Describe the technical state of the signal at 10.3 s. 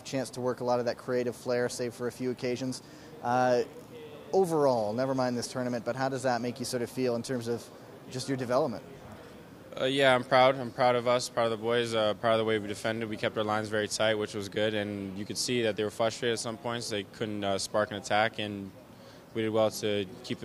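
At 10.31 s there is a small jump forward in the sound, likely a dropped buffer (overrun) that cut out a few milliseconds and spliced the edges together.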